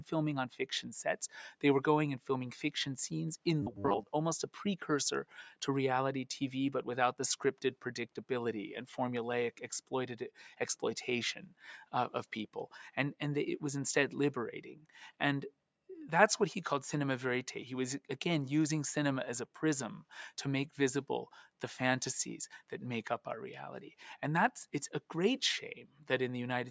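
The audio has gone through call-style microphone processing, with nothing above 8 kHz, and a couple of things go wrong. From 3.63 to 4.08 s there's robotic sound from repeated short buffers: a rigid, metallic buzz at 100 Hz that only loosely tracks the underlying sound. Likely cause is that fresh audio wasn't arriving fast enough, so the software kept replaying the last 10 ms chunk, which sets that 100 Hz buzz, and roughly half of that stretch is repeats rather than real material. Then there's sound cut by the noise suppressor, twice. At 5.25 to 5.62 s the suppressor mistook part of the sound for noise and pulled it down by about 12 dB, for roughly a fifth of a second in total. At 25.87 to 26.04 s it happens again, with a drop of about 9 dB over roughly 150 ms, so you hear the level sag or the tail get clipped short there.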